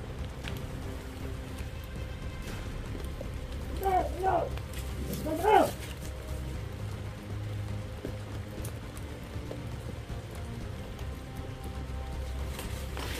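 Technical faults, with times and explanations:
Nothing technical stands out here; there's no fault to point to anywhere in the clip.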